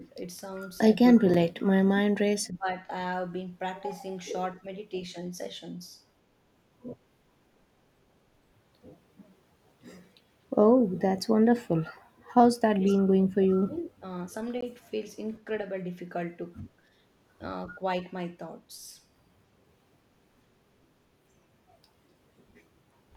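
The speech keeps sinking and thinning in short stretches. There is a brief dip of about 10 dB at 1.15 to 1.19 s, deeper losses of about 30 dB at 1.59 to 1.91 s and about 25 dB at 2.40 to 2.68 s, another small dip of about 10 dB at 4.60 to 4.66 s, and the longest one, nearly a second deep at about 35 dB, between 12.77 and 14.03 s. The likely cause is speech suppressed in double talk. With both ends talking at once, the echo canceller could not tell this talker from the returning loudspeaker echo, so it pulled the level down on both.

A sharp tick at 1.34 s and a short pop-like hole at 14.61 s are each a block of digital silence. The sound drops straight to silence and then returns, with no fade at either edge. At 1.34 s the gap is about 6 ms, short enough to register mainly as a click. At 14.61 s it is about 17 ms, long enough to be heard as a tiny dropout, which points to an output buffer that was not filled in time.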